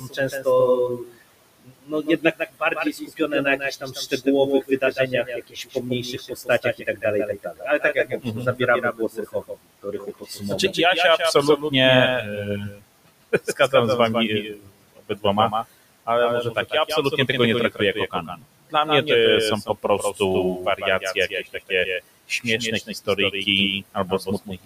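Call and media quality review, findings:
Doubled audio track, throughout: likely a second capture through a slower path, or an edit holding two unaligned copies. A full-band echo trails about 150 ms behind, roughly 5 dB down, with no decay or room colour.

Noise suppressor artifacts, throughout: per-frame band gain cuts steady noise by about 21 dB. Room noise, about 19 dB under speech, drops away between words and comes back beneath them, pumping with the speech.

Speech cut by the noise suppressor, 0.0–13.73 s, before "z wami yy": suppressor misclassifies speech as noise, with drops up to about 22 dB across roughly 7 s in total. Soft consonants and endings sound swallowed.

Same fault, 14.43–19.08 s, after "z wami yy": drops up to about 22 dB, roughly 1.5 s affected in total. Endings and quiet parts fade with the background.

Same fault, 19.61–24.65 s: drops up to about 20 dB, roughly 1 s affected in total. 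Quiet speech is pulled down with the background.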